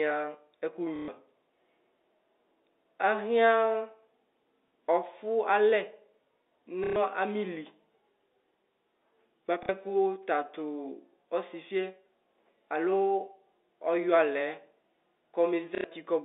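Around 0.96 to 1.08 s there's packet loss with the last packet repeated. The receiver keeps replaying the previous chunk for about 120 ms, giving a short robotic stutter. It happens again at 4.68 to 4.70 s (a brief 30 ms blip), 6.84 to 6.96 s, 9.63 to 9.69 s and 15.75 to 15.84 s. The loop lengths fit 30 ms packets, so longer runs buzz at roughly 33 Hz. All this sits over the narrow 300 Hz to 3.7 kHz G.711 phone band.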